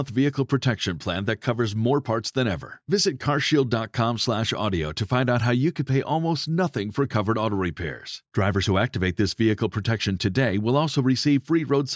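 No technical faults can be heard anywhere in this speech recording. Nothing in it needs a time stamp or a measured value.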